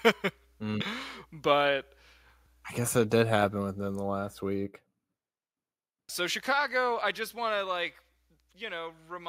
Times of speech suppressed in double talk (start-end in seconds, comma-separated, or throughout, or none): none